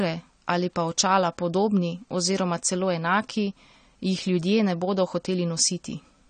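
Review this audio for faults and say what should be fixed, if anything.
Throughout the speech, the sound is dull and smeared, with a plainly audible warbling, fizzy texture on sibilants. This is likely AAC compression at a bitrate that fits about 32 kbps, quantising and band-limiting the spectrum. Encode at a higher bitrate or keep the uncompressed original.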